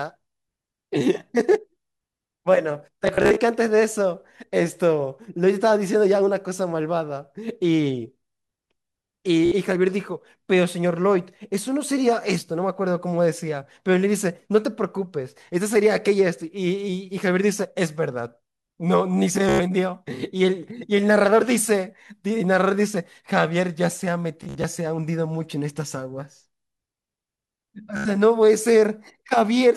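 Speech with Bluetooth stutter in five spots, around 3.07, 9.46, 19.49, 24.43 and 27.97 s. Late or lost packets make the receiver loop short slices, giving a brief buzzy stutter of roughly 60 to 145 ms, then the talk jumps ahead as if it never paused.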